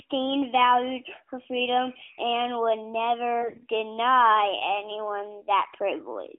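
Between 3.42 and 3.64 s you get a burst of AMR bit errors. That's a quarter second, about eleven 20 ms frames. The weak bits in each frame got flipped, roughly one in ten, but the checksum on the critical bits still passed, so the decoder trusted the data. The pitch and loudness hold, but the excitation pulses and fine spectral detail go wrong, and the speech turns hoarse and gargly. The surrounding narrowband AMR sound, capped near 3.4 kHz, fits the 12.2 kbps mode.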